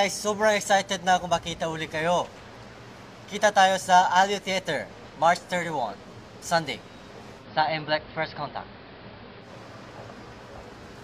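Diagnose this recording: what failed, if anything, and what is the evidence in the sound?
The hybrid radio receiver lost its digital signal and fell back to the station's AM broadcast, a digital radio blending to analogue fault at the reception stage. From 7.37 s the sound cross-fades over 107 ms to the AM path, drops about 1 dB in level, and takes on hiss roughly 30 dB below the signal, with the narrower bandwidth typical of AM. At 9.51 s it blends back to the digital stream.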